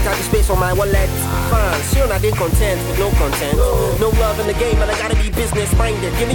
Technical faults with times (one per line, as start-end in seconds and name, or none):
0.00-4.45 low bit depth with dither